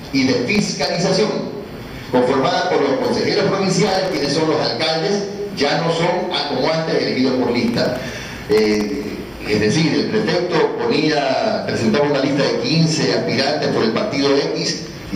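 Bursts of gritty, tearing crackle ride on the audio from 0.55 to 0.95 s, 3.84 to 4.25 s, and 7.68 to 9.12 s, the last burst being the longest and densest. This is processor overload crackle: the processor repeatedly failed to finish each very short buffer, likely under a millisecond, in time, and every miss dropped in a tiny hard-edged gap of silence. Many of these in quick succession blur into crackle that stops once the load eases.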